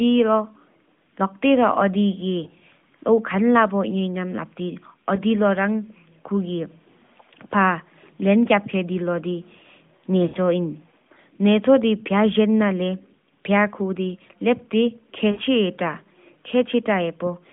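Speech over a narrowband AMR mobile link, band-limited to about 150 Hz to 3.5 kHz. Lost AMR speech frames cause brief warbles and dips at 2.44–2.60, 5.16–5.20, 10.28–10.36 and 15.32–15.40 s. The first is scattered short gaps. The others are single patches of 20 to 60 ms. The decoder is stretching its last good frame with falling level.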